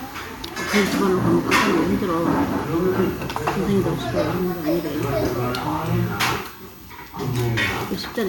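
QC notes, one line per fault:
Nothing stood out on listening to this audio.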